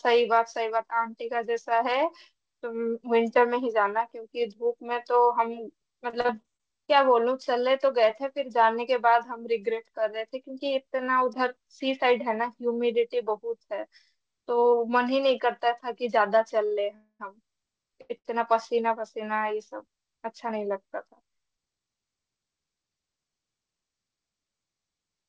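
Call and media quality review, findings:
Repeated packet loss (robotic sound), 6.10–6.90 s. Choppy stretch: six short holes, longest 37 ms, patched by extending the preceding sound. About 160 ms concealed, roughly a fifth of the span, with about 100 ms of real audio gone. Component: jitter buffer concealment after repeated lost or late packets.

Short stall from a late packet, 16.65–16.73 s. Sound held about 57 ms, slight buzz or dip, then resumes from the same point with nothing dropped. Late packet; jitter buffer ran dry.

Short stall from a late packet, 18.01–18.11 s and 18.17–18.27 s. Back-to-back holds of 80 ms and 73 ms, same stretched-sound buzz or dip, nothing lost. Two consecutive late arrivals draining the buffer.

Call audio freeze, 16.95–17.21 s. Last sound drawn out as a fading buzz or hiss, about 240 ms in all, ending in roughly 30 ms of silence, then audio picks up where it stopped. 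A gap is inserted and nothing is missing. Likely packets held up in transit, emptying the jitter buffer until delivery resumed. Cutoff at 8 kHz across the clip fits the G.722 call path.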